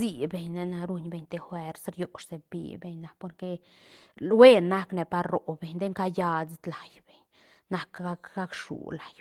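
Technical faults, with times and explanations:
No technical faults; the Opus voice compression runs hybrid and fullband at 20 kbps, with the band reaching about 20.2 kHz and only light coding texture on the speech.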